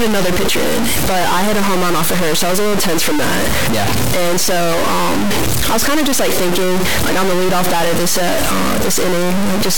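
From start to finish the speech sits under a harsh, buzzy distortion, which sounds like a stuck bit. A data line or converter bit has likely stopped flipping, so about half the samples come out shifted by that bit's weight, here around minus 10 dBFS, which points to a fairly high bit. That big step also chews on the quiet values near zero, so the gaps between phrases fill with a loud, gritty hiss instead of going silent.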